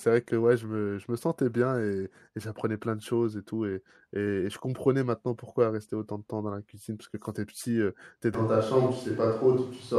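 At 8.35 s the speech abruptly turns roomy and hollow, losing bass, with background noise rising to roughly 30 dB below the speech while overall level barely changes. This likely reflects a switch to a distant microphone, persisting to the end.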